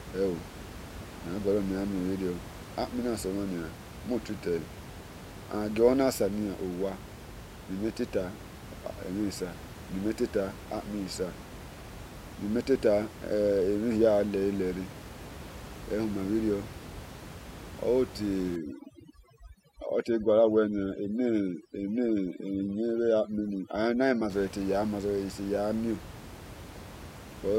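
From 18.56 to 24.30 s, overdone noise removal sets in: a noise reduction stage is acting far too aggressively, pulling individual frequency bands down or cutting them entirely whenever they sit close to its noise estimate. The room noise, about 15 dB below the speech, is stripped to near silence filled with twinkling specks, and the quieter parts of the speech are taken along with it.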